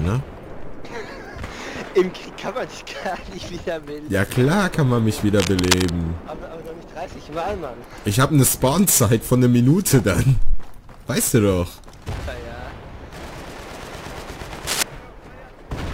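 At 5.40 to 5.95 s, and again at 14.66 to 14.83 s, bursts of cable scratch noise appear: dense, ragged crackle, first about 5 dB below the sound, then roughly level with it. The likely cause is a worn cable or connector being moved, its contact resistance fluctuating.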